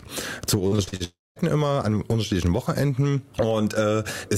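A receiving device running on its own clock, not locked to the sender's digital link and off by something like 20 parts per million, produces word clock ticks from 0.40 s to the end of the audio: roughly once a second the clocks slip, a single sample is dropped or repeated, and a sharp tick sounds. Between 0.67 and 1.02 s, repeated packet loss (robotic sound) punches five holes, the longest 43 ms, and patching them covers about half that stretch, giving choppy sound with pieces missing. From 1.04 to 1.38 s the audio stops, most likely a long network dropout: the last sound is stretched into a fading buzz or hiss, then about 190 ms of silence, and the sound resumes without the lost portion.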